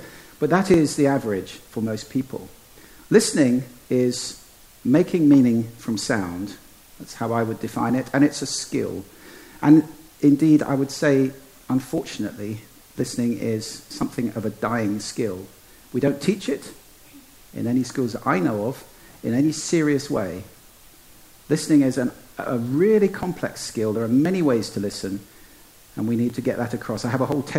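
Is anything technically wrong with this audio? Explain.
Yes, there are periodic USB or driver dropouts. From 0.74 s to 27.32 s, something blocks the audio path every 1.02 s, and a couple of milliseconds get skipped outright each time. You hear around thirty evenly spaced ticks, only where there's signal.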